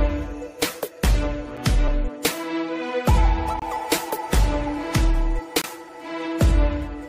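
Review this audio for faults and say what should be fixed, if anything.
Gap between stream segments: the timestamps of consecutive 2-second segments don't line up, so the player fills each hole with silence. The result is three hard-edged dropouts about 2 s apart: a short 6.3 ms one at 1.57 s, then 24.9 ms from 3.59 to 3.62 s and 23.4 ms from 5.62 to 5.64 s. Each adds that much silence without removing any audio. To prevent it, make each segment's start timestamp equal the previous segment's end exactly.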